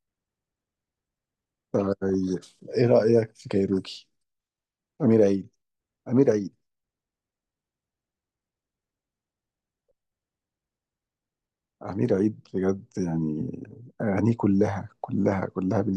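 A speech clip with two brief bursts of burbling at 2.09 to 2.14 s and 12.05 to 12.15 s. This is DAB burbling: weak reception lets bit errors, around 0.1 to 0.15 percent, slip past error correction and throw individual MP2 sub-band levels off for up to a frame at a time, across 6 and 4 frames.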